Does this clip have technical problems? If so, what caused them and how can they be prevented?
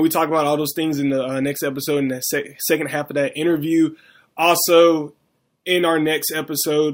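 No, there are no technical problems to point to in this speech recording. With nothing going wrong, there is no cause to trace and nothing that needs preventing.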